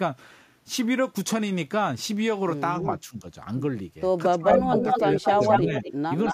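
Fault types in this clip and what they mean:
speech suppressed in double talk: speech dips by up to about 15 dB near 2.8 s and 4.3–5.8 s, likely echo-canceller ducking; the waveform envelope visibly sags there.
echo leak: a copy of the speech trails 220 ms behind at nearly equal level from 4.5 s, likely loudspeaker pickup; the spectrogram shows duplicated, time-shifted harmonic patterns.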